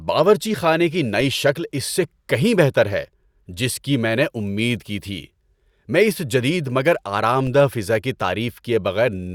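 At 1.21 s and again at 7.47 s there's a DC step: the waveform's zero line jumps suddenly, and a roughly 20 Hz high-pass then drags the offset back down. Each one comes across as a short low thump, while the speech carries on untouched.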